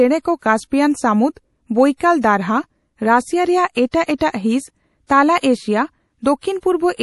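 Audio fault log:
throughout MP3 compression: the encoder was likely starved of bits, which fits a rate near 48 kbps, so it removed everything above 11.5 kHz and dropped weak frequency lines frame to frame, making the speech dull, watery and swirly, with metallic chirps on s sounds.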